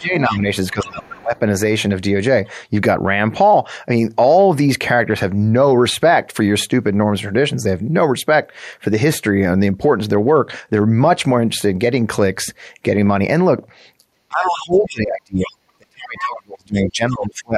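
From 0 to 1.34 s the talker's level sags by up to about 20 dB over roughly 0.7 s. This is speech suppressed in double talk, likely an echo canceller turning down both sides when both spoke at once. The waveform shows a hollowed, broken envelope, and the spectrogram's upper bands thin out.

Within that stretch, the other side's voice leaking through appears at 0.25–0.38 s and 0.84–1.22 s, about 20 dB under the talker. It is likely residue the canceller failed to remove, and shows on the spectrogram as faint, separate harmonic traces.

Deeper suppression runs from 14.28 to 17.54 s, reaching about 35 dB over about 3 s. On the spectrogram this stretch has gaps and near-blank patches.

Leakage returns at 14.51–14.89 s, 15.44–15.50 s, 16.17–16.22 s and 16.81–17.16 s. The last two are louder, at about 15 dB below the speech.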